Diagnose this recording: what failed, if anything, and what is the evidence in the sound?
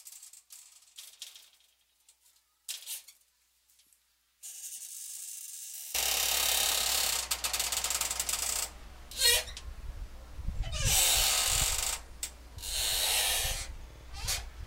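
Opening stretch, 0.00 to 5.95 s: one channel inverted, likely from a polarity-reversed leg in the analogue wiring. Summed to mono, the content common to both sides cancels, so the level drops by about 13 dB and centred material thins to a faint difference signal.

At the codec or storage stage, repeated frames: a 52.2 ms block, consistent with a pair of compressed frames, was played again. At 9.80 s it sounds once more, adding 52.2 ms. From 13.90 to 14.06 s it loops three extra times, an audible stutter adding 156.7 ms.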